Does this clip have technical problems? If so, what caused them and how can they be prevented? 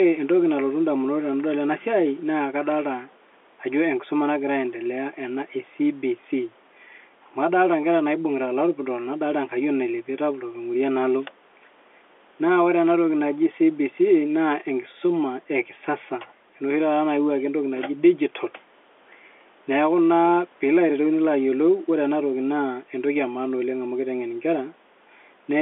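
No: the speech sits in a G.711 telephone band of about 300 Hz to 3.5 kHz with nothing above 3.8 kHz, and the room noise lies about 37 dB below it, both normal for a fixed-line call.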